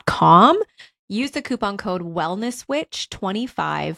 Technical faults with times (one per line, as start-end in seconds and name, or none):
0.36-0.88 zipper noise